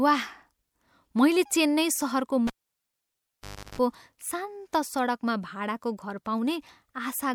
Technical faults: cable pulled and plugged in

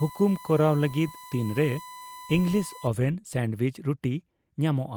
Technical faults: USB whine

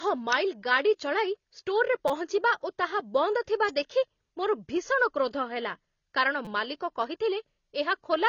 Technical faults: AAC compression; electrical switching spike; repeated buffer

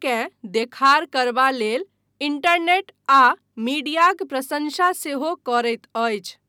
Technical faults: none

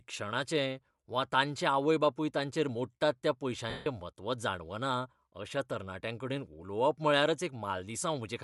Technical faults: Bluetooth LC3 compression; lost LE Audio frames

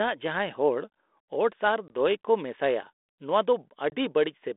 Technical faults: packet loss on an ADPCM call

